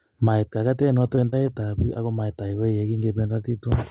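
Speech that turns choppy and robotic from 0.82 to 1.97 s, with short holes up to 30 ms each, about a tenth of that stretch patched over: repeated packet loss, each gap filled by continuing the last sound. At 2.47 to 2.51 s a sound is held about 20 ms too long, with nothing missing, a short stall from a late packet that briefly emptied the jitter buffer. At 3.27 to 3.31 s there is a brief smear where 20 ms of audio never arrived, a short concealed packet loss bridged by extending the preceding sound. The call path's narrowband sound, with nothing above 4 kHz, fits a G.711-type telephone codec.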